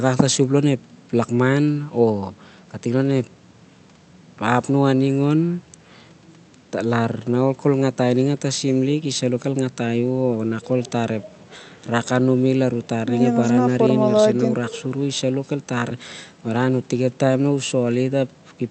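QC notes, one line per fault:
No faults to note in this speech clip.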